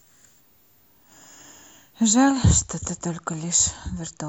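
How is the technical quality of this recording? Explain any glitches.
The recording carries one clear fault, a switching supply whistle over the first part of the speech. From 0.0 to 2.30 s a faint high-pitched tone sits around 15 kHz, wandering between 14.7 and 16.2 kHz, roughly 40 dB below the speech. A nearby switch-mode power supply is cycling at an audible rate, in burst mode or beating against another converter, and its switching frequency shifts with load. The result is a thin, drifting whine above the speech that then disappears.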